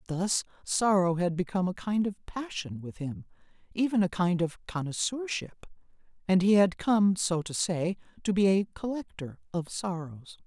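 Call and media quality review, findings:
Listening through the speech recording turned up nothing worth flagging in this ticket.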